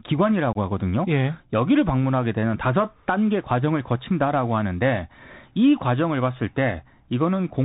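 From the first moment the speech has that Bluetooth CVSD headset codec sound: it's squeezed into a narrow band with nothing above 4 kHz, which fits a 64 kbps CVSD link. Each sample is just a one-bit up-or-down step whose size adapts, so it can't keep up with loud, bright sounds. That's why the s sounds go scratchy and a grainy hiss sits under everything, and here the damage is plainly audible.

Then at about 0.53 s there's a spot of unconcealed Bluetooth headset packet loss, running to about 0.57 s. Roughly 22 ms of speech just drops out, which suggests a few voice packets between headset and phone went missing with nothing filling the gap. You hear a short hole with hard edges that can click, and the speech comes back a touch quieter for a moment as the CVSD step size recovers.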